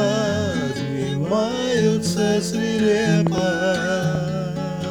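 Loud pops sit on top of the sound: a double pop from 3.27 to 3.40 s, about 15 dB above the signal, and a single pop at 4.15 to 4.17 s, about 10 dB above. These are likely voltage pulses from a plug, switch or static, and the audio carries on underneath.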